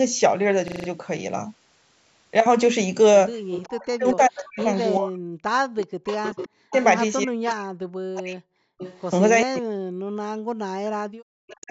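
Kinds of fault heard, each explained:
System hang loop: the system froze while the hardware kept replaying one 40 ms buffer, giving five exact repeats, a 25 Hz stutter at 0.68 s.
Echo leak: likely the canceller missed loudspeaker pickup and sent it back, heard as a copy of the speech delayed 386 ms, about 15 to 20 dB down.
Speech suppressed in double talk: likely the canceller mistook overlapping talk for echo and pulled it down, so the speech dips as much as about 40 dB.
Background gated by the echo canceller: the canceller clamped the microphone while the loudspeaker played, so the room sound drops about 40 dB for 0.2 s at 5.87 s.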